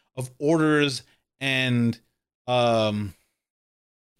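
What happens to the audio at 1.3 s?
Nothing goes wrong at 1.3 s; the audio is intact and continuous through that moment, with no dropout, click or distortion.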